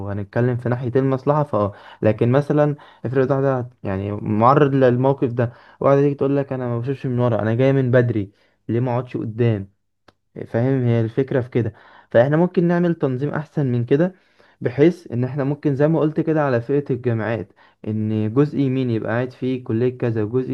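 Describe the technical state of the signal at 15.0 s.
At 15.0 s the speech signal is intact, with no audible fault at that moment.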